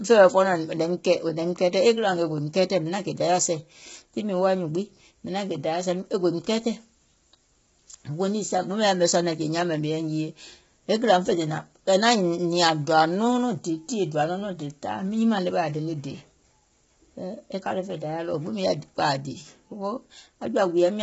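From start to finish the speech sounds rough and grainy, with hiss between the harmonics and nothing above 7.7 kHz. A spectrogram shows smeared harmonic lines under a hard ceiling. The cause is likely heavy low-delay AAC compression (AAC-ELD), fitting roughly 16 kbps.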